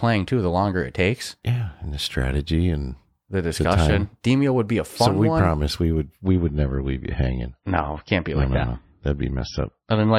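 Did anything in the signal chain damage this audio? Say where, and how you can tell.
Yes, network stage: after "one promise we would", from 6.26 s, everything above 6 kHz vanishes abruptly with no gap. That is an adaptive stream at a lower bitrate, consistent with a switch to MP3 at about 27 kbit/s.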